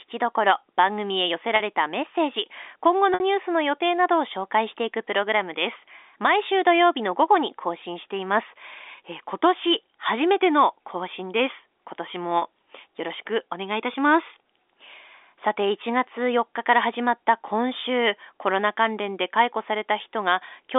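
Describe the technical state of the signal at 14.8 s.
At 14.8 s the speech is intact, carried cleanly through the G.711 telephone coding with its narrow line band and no fault to be heard at that moment.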